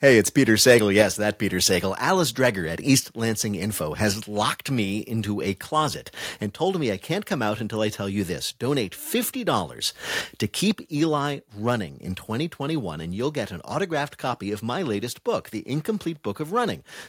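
Microphone overload at 0.05–0.18 s and 0.68–1.02 s: the input was driven about 3 dB and then about 5 dB past the converter's limit, likely from too much microphone gain, so the loudest peaks are squared off (about one to two percent of samples), giving a crackling, distorted edge.

Microphone volume stepped down at 1.02 s and 3.06 s: the input level drops suddenly, by about 5 dB and then about 2 dB, likely the call software cutting device gain after detecting overload. Speech and background fall together; the first step lands exactly as the second overload ends.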